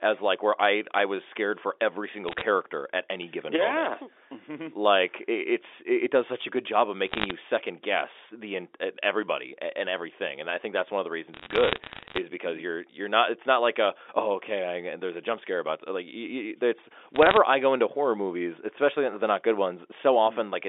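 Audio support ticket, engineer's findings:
Bit errors on a digital phone line at 2.28–2.41 s, 7.06–7.31 s, 11.34–12.18 s and 17.14–17.37 s. Sharp ticks and crackle over unchanged speech, consistent with flipped sign or high-order bits in single G.711 mu-law samples at a rate on the order of half a percent, worst in the longest burst. The 64 kbps line's 300 Hz–3.6 kHz band is audible.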